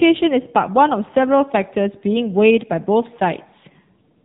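A speech clip that sounds boxed-in and buzzy from start to finish, with nothing audible above about 4 kHz and a thin, synthetic edge on every vowel and consonant. The damage is heavy and is the signature of the AMR narrowband mobile codec: the audio was squeezed to telephone bandwidth and rebuilt from a vocal-tract model excited by a handful of pulses per short subframe. The coarseness fits one of AMR-NB's lower modes, around 6.7 kbps.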